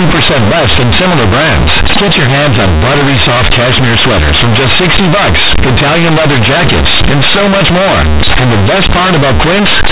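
From start to finish the speech carries companded audio read as linear: the mu-law bytes from G.711 telephone coding are played back as plain 8-bit samples with no expansion. Every sign change throws the output across roughly half its range, so soft passages come out as large as loud ones. The result is loud, buzzy distortion with heavy noise filling the pauses. A mu-law versus A-law mix-up would sound only mildly rough, and clipping would leave the pauses quiet.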